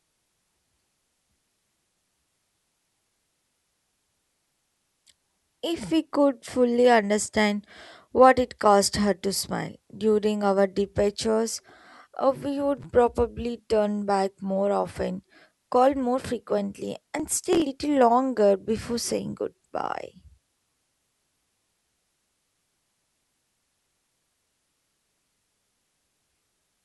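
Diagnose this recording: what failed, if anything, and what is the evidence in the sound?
Loose connector crackle in the analogue wiring, 12.77 to 12.85 s: a contact making and breaking chops the speech, seen as irregular broadband vertical spikes.

Processor overload crackle at the driver/buffer stage, 17.20 to 17.62 s and 23.59 to 24.07 s: missed deadlines skip audio, leaving dense, hard-edged gaps fitting roughly 5 ms buffers.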